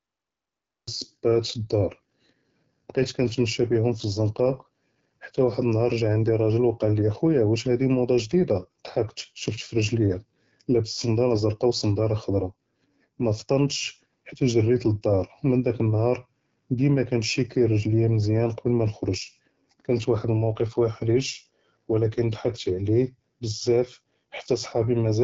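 The file opens on dead digital silence, and at about 0.88 s the speech just appears already mid-sound. That's a cut-off start: the recording or stream began late and caught the sound partway through, so there's no natural attack or fade-in. It sounds like something was sliced off the front, with the level jumping straight from nothing to full signal.

Throughout the clip you can plainly hear the AMR wideband (HD Voice) codec. The speech has that rough, raspy, buzzy texture this codec takes on at its lower rates, and the damage is consistent with the 8.85 kbit/s mode, one of the two lowest. The codec models the vocal tract and drives it with pulses, and at this rate there aren't enough bits to do that cleanly. The top end also stops dead, with nothing above about 7.5 kHz.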